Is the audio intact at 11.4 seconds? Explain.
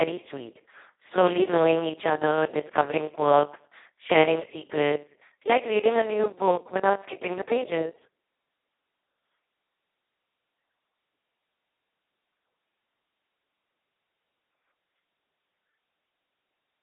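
No. At 11.4 s, as throughout the clip, the speech passes through the Speex codec at a very low setting, which fits roughly 2 kbps, leaving almost no bits for the excitation. The result is heavily hoarse, noisy, near-robotic speech squeezed into a 300 Hz to 3.7 kHz telephone band, with nothing above 3.8 kHz.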